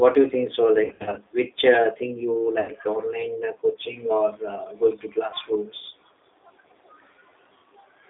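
The whole recording carries the G.729 codec at 8 kbit/s, with the line band limited to roughly 250 Hz to 3.7 kHz, so the low end is thin and nothing reaches the upper treble. The damage is plainly audible: the speech is rebuilt from a vocal tract filter, a pitch predictor and a handful of pulses per short frame, which gives consonants and vowels a rough, slightly synthetic texture rather than a natural one.

From 0.84 to 1.20 s there is VoIP packet loss concealed by the speech codec. About 200 ms of audio is missing, scattered across 320 ms, with the longest gap 60 ms, which fits roughly ten lost 20 ms packets. At each gap the decoder stretches its last pitch and filter state, so the sound is drawn out and drops in level. Because every frame depends on the previous one, the speech stays weak and smeared between the gaps and for a moment after them. A second, shorter burst of the same loss runs from 2.60 to 2.72 s, with 80 ms missing. 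That points to around four packets, and it produces short, fading stretches before the speech recovers.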